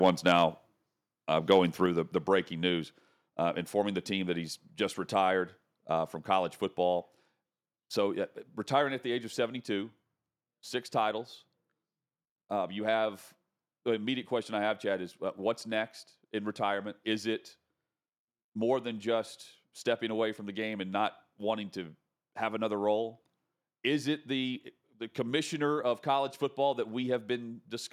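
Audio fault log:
0.03–0.44 s and 1.51–1.59 s, microphone overload: the loudest peaks break up into a harsh, crackly edge, most likely because the input level ran about 3 dB past the converter's ceiling and the tops of the waveform were sheared off. On a waveform the peaks show flat plateaus, under one percent of samples in the first stretch and around two percent in the shorter second burst. A spectrogram shows broadband vertical smears of distortion energy at those peaks.
1.86 s, microphone volume stepped down: shortly after the second distorted burst, the sound and its background drop together by about 4 dB in a single step, likely because the call software cut the device's input gain in response to the clipping. On a waveform the envelope shrinks abruptly at that instant with no fade. On a spectrogram everything from that point on is uniformly dimmer, including the noise floor.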